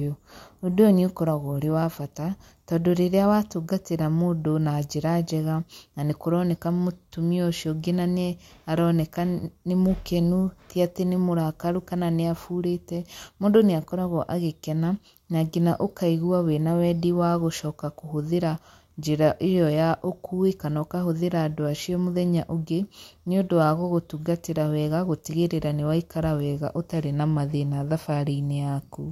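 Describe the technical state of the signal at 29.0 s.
At 29.0 s the speech signal is intact, with no audible fault at that moment.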